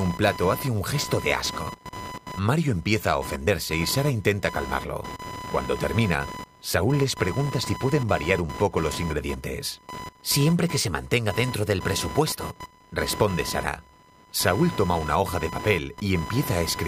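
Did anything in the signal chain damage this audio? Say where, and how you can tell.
Yes, in the analogue wiring. Computer activity noise runs through the whole speech clip. It is a buzzing, chirping layer with a pulse rate around 1 kHz. It sits only some 15 dB below the speech, so it is plainly audible. It rises and falls on its own schedule, not with the talking. That points to the computer's load changes. Processor, graphics or mouse activity pulls current through a ground shared with the audio input, and the interface picks that up.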